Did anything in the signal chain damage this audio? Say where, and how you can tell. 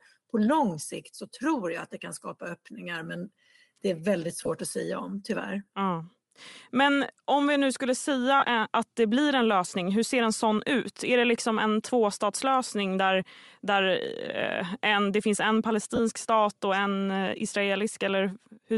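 Yes. At the codec stage, the whole clip has a grainy, breathy edge on the upper band, where detail has been swapped for shaped noise. That's likely Bluetooth LC3 compression, and the damage fits a 48 kbps, 7.5 ms setup.

Over the radio link, lost LE Audio frames turn the speech into brief noisy smears: 4.36 to 4.49 s between "men det är väldigt" and "att säga om tyvärr", 8.40 to 8.42 s after "om vi nu skulle", and 15.96 to 16.00 s before "stat och en eh". The decoder fills each gap with the last spectrum and random signs.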